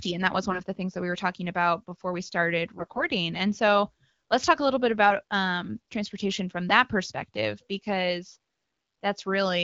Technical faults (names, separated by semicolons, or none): AMR bit errors